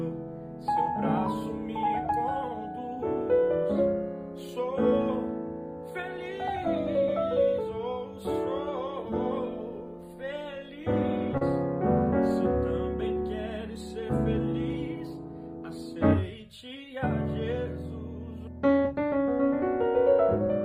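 Right around 11.37 to 11.42 s you get a short stall from a late packet. A packet didn't show up on time, the jitter buffer ran dry, and the receiver just held the last bit of sound going for about 37 ms until the packet landed, then picked up exactly where it left off. Nothing actually goes missing. You just hear one moment drag a touch, with a faint buzzy or slightly dipped quality, and everything after it sits about 37 ms later.

Then from 14.74 to 15.26 s there's a jitter buffer speed-up. The buffer had built up more audio than it wanted, so the receiver clawed the delay back by snipping out tiny pitch-period-sized slices over and over, something like 50 ms in total. That makes that half-second play at about 110% speed while the pitch stays put, so it comes across as a brief, slightly rushed stretch rather than anything chipmunky.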